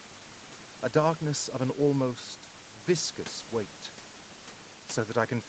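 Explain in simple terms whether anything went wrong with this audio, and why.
Nothing went wrong here: the speech has passed through an ordinary call, where the microphone processing trims away the deepest bass, the call's compression keeps the sound up to about 8 kHz as expected, and the faint room noise stays well beneath the speech.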